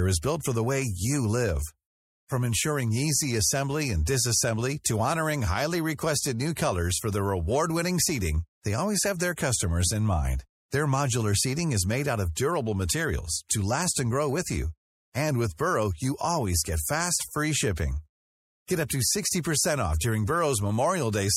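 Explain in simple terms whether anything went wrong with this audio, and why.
MP3 compression damage runs through the whole clip. The speech sounds watery and swirly, with dulled treble and a metallic edge on s sounds. The likely cause is a file squeezed too small, so the encoder discarded high frequencies and faint details that flicker in and out.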